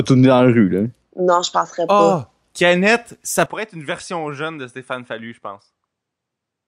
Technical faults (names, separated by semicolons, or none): input switched to a poorer device